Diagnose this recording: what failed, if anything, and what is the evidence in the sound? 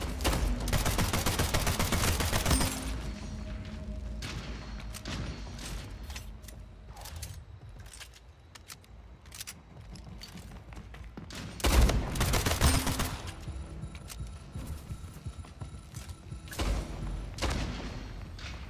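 Nothing failed, and the sound gives no evidence of a fault at any stage of the recording.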